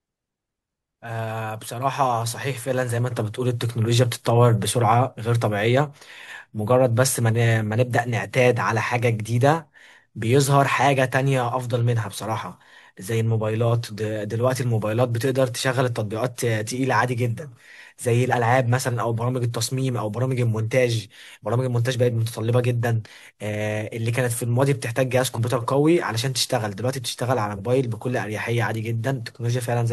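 From 0.12 s to 29.91 s the speech carries clock slip clicks: faint, evenly spaced ticks about every tenth of a second, likely from two unsynchronised clocks drifting apart by around 200 ppm, each slip dropping or repeating one sample. A spectrogram shows a comb of thin vertical lines at regular spacing, most visible where the speech is loud.

At 25.34 s and again at 27.56 s, compressed frames are skipped. The first loses one 42.7 ms frame (about 40 ms of audio), and the second loses roughly two frames (around a tenth of a second). At each join the speech jumps ahead by the missing audio. On the waveform the envelope jumps abruptly, and the spectrogram shows the harmonic pattern shifting at a seam.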